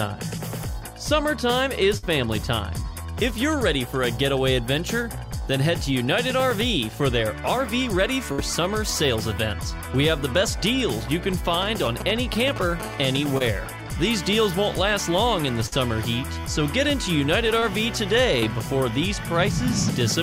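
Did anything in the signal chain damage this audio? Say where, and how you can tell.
Yes. The network stage lost bursts of packets at 1.97 to 2.04 s, 8.32 to 8.40 s and 15.66 to 15.74 s. Each time the last sound is held and faded for 50 to 55 ms. Then the audio jumps ahead, skipping about 60 ms.

Short concealed packet loss also comes from the network, at 13.38 to 13.42 s, 17.60 to 17.64 s and 18.40 to 18.44 s. About 20 ms goes missing each time. The decoder extends the preceding sound to bridge it, leaving a brief smear or wobble.

The analogue wiring picked up GSM signalling bursts from a nearby 2G phone between 11.53 and 12.82 s. You hear a galloping dit-dit-dit of short 217 Hz buzzes, roughly 10 dB below the signal. The circuit is rectifying intermittent radio bursts.

A steady GSM phone buzz follows from 12.82 to 14.14 s, at about 20 dB below the signal. It is a hard, raspy 217 Hz tone with many harmonics. 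The phone has entered a call, and the wiring demodulates its continuous 217 Hz burst train.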